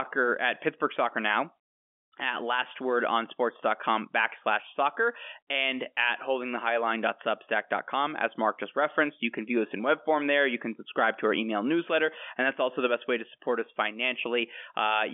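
No technical faults can be heard in the speech, which carries the narrow, telephone-like band of G.711 coding, roughly 200 Hz to 3.4 kHz.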